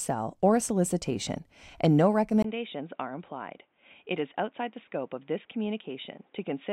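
At 2.42 s, after "a solicitation and no", a 20 ms gap precedes a sudden change: the speech runs to the end band-limited to 3.8 kHz, around 10 dB quieter, over a new noise floor roughly 35 dB down, likely from the input switched to a poorer device.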